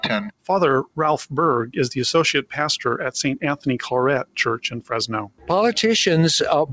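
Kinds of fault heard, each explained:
Sound cut by the noise suppressor: from 5.28 to 5.49 s the suppressor treated the sound as noise and pulled it down by about 18 dB at its deepest. The waveform envelope sags sharply there, and the spectrogram shows a briefly faded band.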